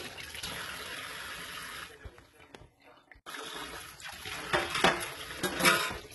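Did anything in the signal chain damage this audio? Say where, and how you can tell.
Yes, at the codec: HE-AAC compression throughout, likely. The treble is gritty, metallic, and empty above 11.8 kHz. Unlike plain low-pass filtering, its replicated bands mismatch the harmonics, consistent with heavy damage around 16 kbps.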